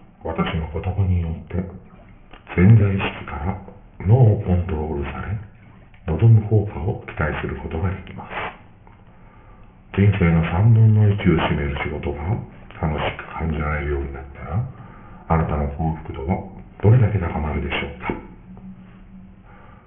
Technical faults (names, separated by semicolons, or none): aliasing